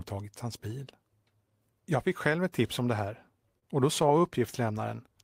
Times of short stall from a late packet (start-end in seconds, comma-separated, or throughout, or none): 3.59-3.64